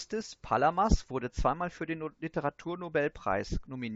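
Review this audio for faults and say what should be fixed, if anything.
Nothing to fix: the speech carries the expected G.722 wideband character at 64 kbit/s, with audible coding effects faint at most, and no faults are present.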